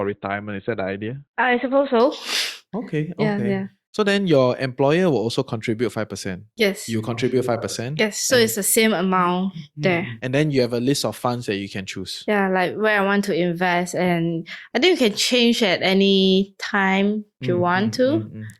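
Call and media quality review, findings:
Adaptive stream starting at a low bitrate, 0.0 to 2.0 s. Speech dull and band-limited, nothing above 4.2 kHz, heavier codec artefacts. Player: opened on a low rung, consistent with Opus near 12 kbit/s, then stepped up at 2.0 s, likely near 64 kbit/s, once throughput was measured. Treble returns abruptly, no gap.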